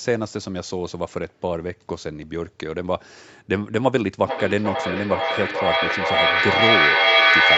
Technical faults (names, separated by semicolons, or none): feedback echo between two devices